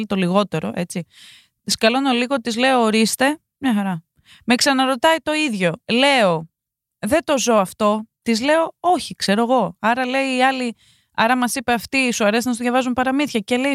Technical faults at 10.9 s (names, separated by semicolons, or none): none